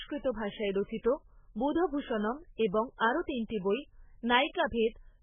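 Throughout, the speech sounds dull and watery, with a swirling, metallic edge and smeared attacks, and nothing reaches above 3.5 kHz. The likely cause is heavy MP3 compression starved of bits, fitting roughly 8 kbps, so treble is cut and weak frequency lines flicker frame to frame.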